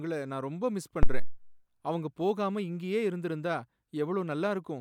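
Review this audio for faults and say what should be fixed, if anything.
Phantom power thump at 1.03 to 1.44 s, between "நான் ரொம்ப மிஸ்" and "அவங்க போகாம இங்கேயே இருந்திருந்தா": switching the supply on a live input sent a voltage step through the coupling capacitors, producing a deep thump peaking at about -10 dBFS that decays over roughly 91 ms. To prevent it, mute the channel or pull the fader down before switching phantom power.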